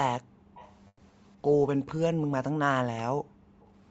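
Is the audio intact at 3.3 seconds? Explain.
No. At 3.3 seconds you're right in the middle of the background being gated by the echo canceller, which runs from about 3.16 to 3.61 s. The canceller decided the loudspeaker was active and clamped the microphone down hard, by about 40 dB at its deepest. So the room tone just falls away, close to silence, for roughly half a second, and then comes back once the canceller releases.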